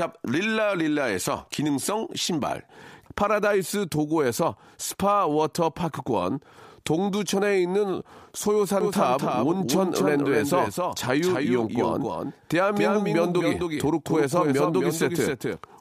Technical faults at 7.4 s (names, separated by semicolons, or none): none